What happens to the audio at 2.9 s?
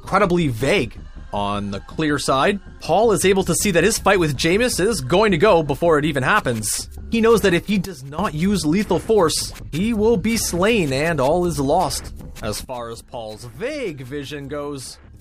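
Nothing goes wrong at 2.9 s; the audio plays through that point intact, with no dropout, glitch or other fault.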